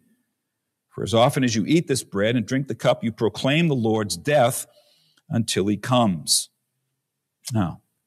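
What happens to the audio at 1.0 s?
At 1.0 s the speech plays through intact, with no fault at that moment.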